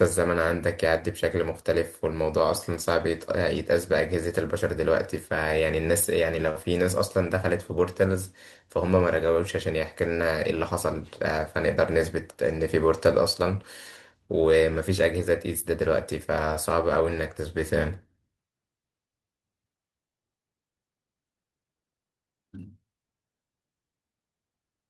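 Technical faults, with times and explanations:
6.49 to 6.58 s, burst of packet loss: the receiver stretches the last sound for 52 ms, fading it as the gap lengthens, then speech jumps ahead with 60 ms missing. Unlike a silent dropout, the gap is filled, and it runs longer than single-packet concealment.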